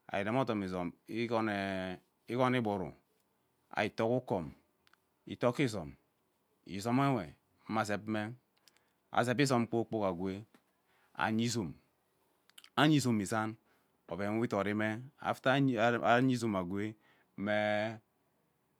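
No technical faults are audible.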